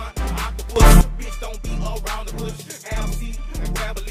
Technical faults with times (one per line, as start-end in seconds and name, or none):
0.76-1.01 sudden gain jump